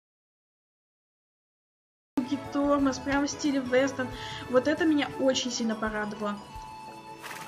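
The audio opens in an audio dropout to silence that is already under way at 0 s. It lasts until 2.18 s. The gap is silent with no room tone at all. The input was likely lost through a disconnected device, failed link or mute, with recording continuing regardless.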